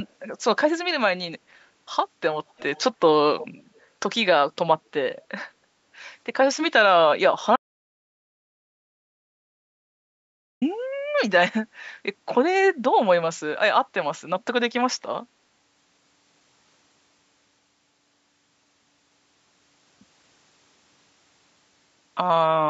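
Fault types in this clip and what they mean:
Echo leak: A quiet copy of the speech returns about 298 ms late, at 2.49–2.81 s and 3.38–3.48 s, likely residue an echo canceller missed.
Audio dropout to silence: The speech cuts to complete silence, with no room tone, from 7.56 s to 10.62 s, losing about 3.06 s, likely from a lost input.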